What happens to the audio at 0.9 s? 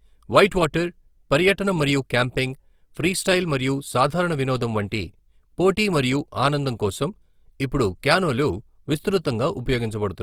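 At 0.9 s the speech carries Opus compression damage, which runs through the whole clip rather than starting there. The likely cause is an encoder in its music (CELT) mode starved of bits, which fits a rate around 24 kbps. It refills thin bands with folded or noise-like content, so the voice sounds rough and grainy while bandwidth stays full, reaching 20.4 kHz. Unlike MP3 damage, there are fewer swirling, hollow gaps.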